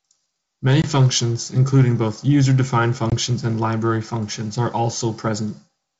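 At 0.82 s the speech drops into a hard-edged silent hole about 20 ms long. This is packet loss on an ADPCM call, with what sounds like a single packet missing. The gap is filled with silence, and the receiving decoder's predictor and step size no longer match the sender's. So the speech comes back slightly distorted. It settles within some tens of milliseconds.

From 1.61 to 1.82 s there is hard clipping. The signal runs about 2 dB past what one stage can pass. Its peaks are sliced flat. Those flat tops add harmonics high in the spectrum. The overload is mild, so it is heard as crackle on the loudest peaks rather than a constant fuzz.

At 3.10 s the same ADPCM packet loss happens again. Another hole of about 20 ms appears, again about one packet's worth. The restart brings the same brief distortion while the decoder catches up. The wideband G.722 sound around these events keeps speech clear up to about 7 kHz, which fits the 64 kbit/s mode.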